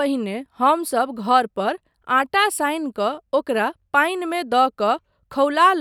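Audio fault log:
4.32 s, bit error spike: a single sample leaps to about −26 dBFS from a flipped bit, one sharp tick; waveform shows a lone needle, spectrogram a thin full-band vertical line.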